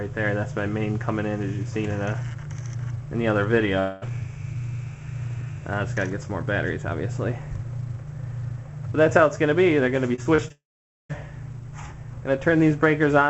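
Long network dropout, 3.79 to 4.04 s: about 220 ms of audio is simply missing. The gap is bridged by a smeared extension of the preceding sound, with no silence, and the sound resumes further on. The likely cause is a stall in the incoming stream.

Repeated packet loss (robotic sound), 10.16 to 10.52 s: four short holes, the longest 26 ms, are each patched by repeating the last fragment. About a quarter of this stretch is concealment, so the sound turns choppy.

Long network dropout, 10.52 to 11.11 s: right after that choppy passage, about 580 ms vanishes, most likely from the connection briefly cutting out. A brief fading continuation gives way to roughly 500 ms of silence before the sound returns without the lost part.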